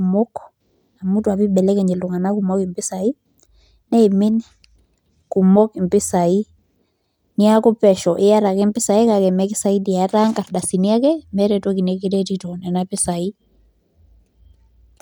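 No technical faults turn up anywhere in this speech recording, so there are none to describe in time order.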